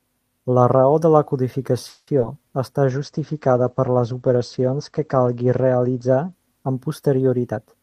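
Call audio freeze at 1.89 to 2.09 s: the sound stalls and the last moment is stretched into a fading buzz for about 180 ms, then resumes where it left off. The likely cause is delayed packets draining the jitter buffer, which inserts a gap rather than losing audio.

Short concealed packet loss follows twice in quick succession, at 2.19 to 2.22 s and 2.22 to 2.25 s. In each, about 20 ms of audio never reached the decoder. The receiver extrapolated from the preceding sound and blended back, leaving a brief smear or wobble.

Call bitrate drop from 2.86 to 6.99 s: the encoder's rate fell from 32 to 13 kbps after the bandwidth estimate sank, and the audio band narrowed from 20 kHz to 8 kHz. The sound turns muffled and coarse, worst for about 2.8 s before recovering.

Jitter buffer speed-up at 7.48 to 7.82 s: the receiver held too much buffered audio and cut it back by trimming short pitch-period slices over and over, about a tenth of a second in total. 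Playback runs at roughly 127% speed with unchanged pitch, sounding rushed.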